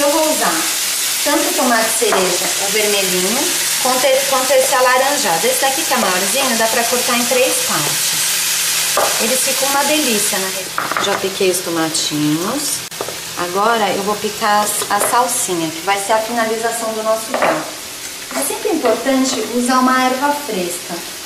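A gap at a join of encoded pieces opens at 12.88 s and lasts until 12.91 s, a silence of about 32 ms. The audio was encoded in separate pieces and butted together without trimming, so the encoder's start-up delay and the padding of the previous piece's final frame both stay in at the seam. The sound drops out abruptly, with edges softened by the codec, then resumes exactly where it stopped.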